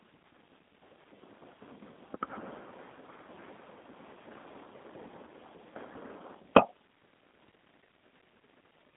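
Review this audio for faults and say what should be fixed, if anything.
The speech was carried through a G.729 codec, a low-rate coder whose sound points to about 8 kbit/s, for the whole clip. It rebuilds speech from a vocal tract model and a few pulses per frame, so it sounds plainly rough and synthetic, held to roughly 200 Hz to 3.6 kHz with nothing above 3.8 kHz. To prevent it, route the call or recording through a wideband codec such as G.722 or Opus at a generous bitrate.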